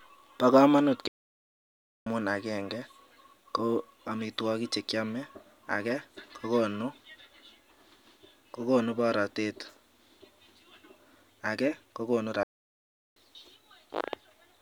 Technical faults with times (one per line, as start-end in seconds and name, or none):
1.08-2.06 playback stall
12.43-13.16 playback stall